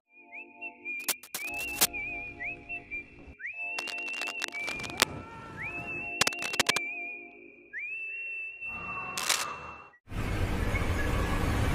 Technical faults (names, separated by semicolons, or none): cable scratch noise